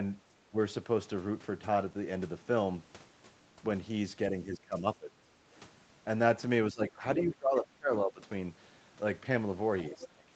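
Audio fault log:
0.46–0.57 s, 4.3–5.43 s, 6.72–8.21 s, 9.96–10.31 s: speech suppressed in double talk. The speech dips by about 15 to 25 dB, deepest in the last stretch, with roughly a second at most affected in any one stretch. This is likely an echo canceller failing to separate near and far talkers and turning both down.
7.19–7.23 s and 9.79–10.06 s: other side's voice leaking through. A second voice appears briefly, about 10 dB and then about 15 dB below the main speech, likely because residual loudspeaker echo was not fully cancelled from the microphone.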